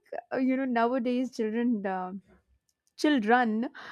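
No technical faults are audible in this speech recording.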